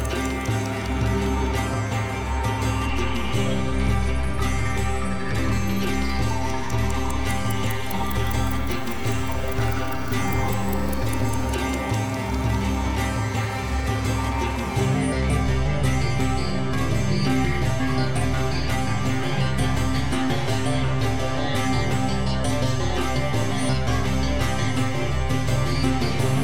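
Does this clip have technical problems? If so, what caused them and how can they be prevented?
Yes. A DC step at 2.89 s shifts the waveform's zero line by about -26 dBFS, which holds until it steps back at 11.45 s. Each jump gives a low thump while the sound carries on unchanged, unlike a handling knock, which disturbs the sound itself. Keep offset-prone inputs and converters AC-coupled or high-pass filtered, and avoid switching them in mid-recording.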